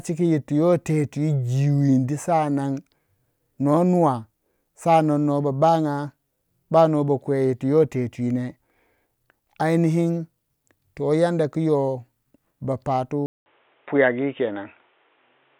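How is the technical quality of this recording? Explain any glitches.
One fault stands out, near the end. At 13.26 s the speech drops out for 200 ms, then returns duller and boxier, with nothing above 3.8 kHz, a level shift of a few dB and a new noise floor well below the signal. This is likely an input switched to a poorer device. On a spectrogram, the upper band is abruptly empty from that point onward. The waveform shows a brief flat gap at the switch.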